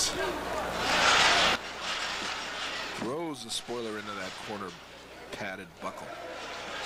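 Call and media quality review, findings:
Sudden gain jump at 1.56 s: sound and noise floor drop about 12 dB together, held to end. Likely an unramped digital gain step or bit shift.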